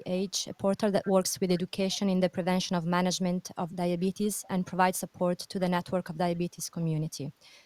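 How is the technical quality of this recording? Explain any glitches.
Two brief glitches spoil the speech. Echo leak at 1.05–1.09 s and 4.43–4.48 s: faint copies, about 20 and 30 dB down, arriving 396 ms late, likely from a loudspeaker's echo canceller letting sound through. They are discrete repeats, unlike reverberation's smooth tail.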